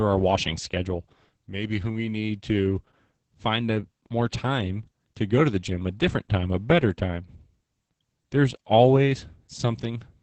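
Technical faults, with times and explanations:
Throughout, Opus voice compression: heavy linear-prediction coding, with the band capped near 8 kHz and a coarse excitation that fits roughly 10 kbps, leaves speech muffled, hoarse and slightly robotic.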